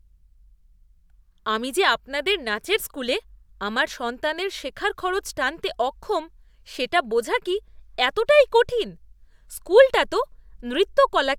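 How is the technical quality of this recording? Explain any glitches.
Nothing to worry about here, as there are no glitches to report anywhere in the recording.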